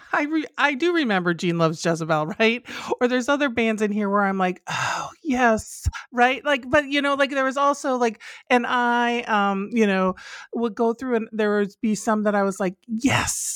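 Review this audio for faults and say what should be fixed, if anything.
No faults turn up in this audio, so nothing needs to be fixed.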